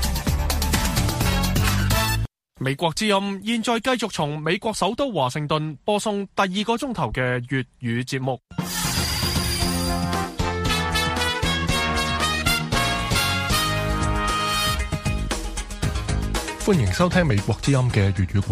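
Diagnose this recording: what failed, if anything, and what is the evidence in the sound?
Nothing in the sound stood out as a failure at any stage on careful listening, so there is no evidence here to point to.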